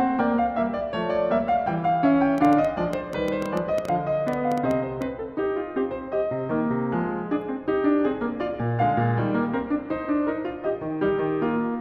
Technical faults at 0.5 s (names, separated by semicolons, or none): none